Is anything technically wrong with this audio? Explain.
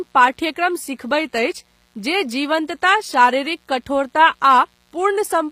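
Yes, two faults run through the whole speech clip.

A mains buzz sits under the speech from start to finish, roughly 40 dB below it. It is based on 60 Hz. Something like a dimmer, rectifier or unshielded line is injecting sharp switching spikes twice per mains cycle, so the interference carries a dense ladder of 60 Hz harmonics reaching well into the kilohertz range. That makes it a raspy, edgy buzz rather than the smooth, low tone of plain hum, which stays close to the fundamental.

The treble shows damage consistent with HE-AAC compression, likely at a low bitrate. The codec keeps only the lower spectrum and synthesises the highs by spectral band replication, copying lower bands upward under a coarse envelope. Here the top end still sounds bright but is clearly artificial. S sounds come out gritty and metallic or lisping, and nothing is present above 15.5 kHz. A simple low-pass filter would just dull the sound, but here the highs are present and sound wrong.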